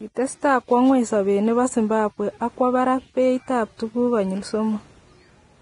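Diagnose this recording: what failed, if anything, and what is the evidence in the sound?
Codec stage: grainy, hissy speech throughout, nothing above 10.6 kHz; likely heavy Vorbis compression around 28 kbps, as noise-filled treble rules out a plain low-pass.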